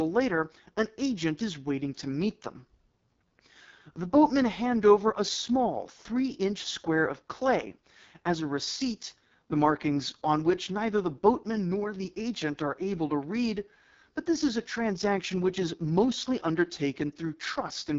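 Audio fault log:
Throughout: AMR wideband (HD Voice) codec. The speech sounds heavily rough, raspy and grainy, with nothing above 7.6 kHz. This fits AMR-WB at its lowest mode, around 6.6 kbit/s, where too few bits describe the pulse excitation and vocal tract shape.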